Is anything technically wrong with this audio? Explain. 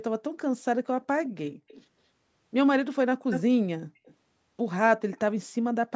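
Yes, there is echo leak at four points in the speech: 1.24 to 1.29 s, 1.68 to 1.84 s, 3.31 to 3.42 s, and 4.05 to 4.15 s. A delayed copy of the voice trails the original by 162 ms in the first event and 222 ms in the others. It sits far below the speech in three events but is nearly as loud at 3.31 s. The likely cause is a far-end loudspeaker whose echo canceller let part of the microphone pickup through. The audio also carries the usual call microphone band-limiting, with nothing above 8 kHz.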